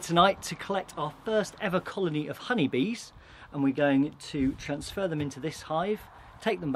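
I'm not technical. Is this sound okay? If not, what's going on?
Yes, nothing in this recording points to any technical problem with how the sound was captured or delivered.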